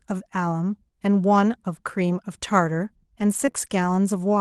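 Speech heard over an Opus call path whose top end stops near 12 kHz. Lost packets were rebuilt from error correction, as eleven separate 20 ms frames between 2.81 and 4.20 s, clustered most densely around 3.2 to 3.9 s, each patch sounding briefly rougher and noisier. In two short concealed packet losses, at 3.45 to 3.49 s and 3.51 to 3.56 s, the receiver extended the preceding sound to fill each 20 ms hole, leaving a brief smear or wobble.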